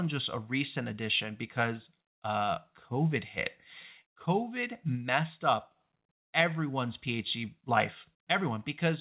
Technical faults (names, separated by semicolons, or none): none